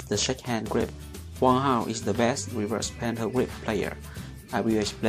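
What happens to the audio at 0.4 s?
At 0.4 s you're in the middle of a train of clicks running from the start of the clip to about 0.9 s. It's a regular ticking at 4.5 clicks per second, around five in all, each with much the same sharp shape and poking up roughly 10 dB above the sound underneath. That evenly spaced, repeated pulse is most likely interference from nearby equipment or a faulty connection or power supply, heard as popping laid over the audio.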